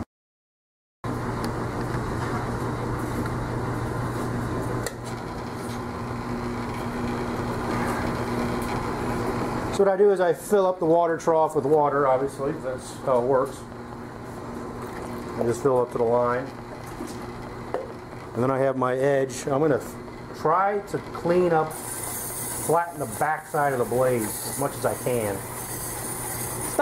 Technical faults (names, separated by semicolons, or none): train of clicks